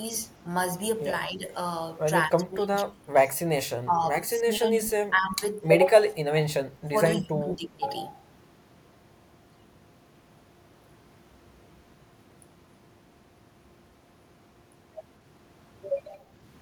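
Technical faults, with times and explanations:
1.26 to 1.45 s, 2.27 to 3.13 s and 3.49 to 7.85 s, speech suppressed in double talk: the voice repeatedly sinks, thins and breaks into pieces. The first dip is shallow, around 10 dB, while the later two reach roughly 25 dB, and the last spans about three seconds of chopped level. The likely cause is an echo canceller hearing both ends at once and ducking everything. This differs from echo leak: sound goes missing rather than being added.
5.56 to 5.60 s, echo leak: a faint, brief scrap of the voice returns 242 ms late, sitting about 35 dB under the direct speech. It likely comes from a far-end loudspeaker whose canceller let a fragment of its microphone pickup through, sending it back down the line. Its fixed delay marks it as a returned copy rather than suppression, which cuts the voice instead of repeating it.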